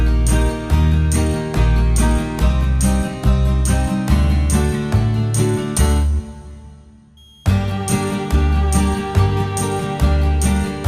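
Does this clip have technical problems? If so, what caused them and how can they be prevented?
Yes, a switching supply whistle from 7.17 to 10.16 s: a faint tone drifting between 3.24 and 3.32 kHz, from a power supply in audible burst mode or beating with another supply. Use a linear supply or isolate it.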